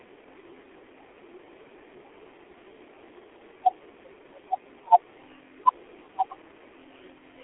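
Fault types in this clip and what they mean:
G.723.1 codec: Throughout, the speech is confined to roughly 300 Hz to 3.4 kHz and rebuilt from a coarse, slowly updated voice model in 30 ms frames, consistent with a rate around 6 kbit/s. Heavy damage leaves it muffled and hoarse, with smeared consonants.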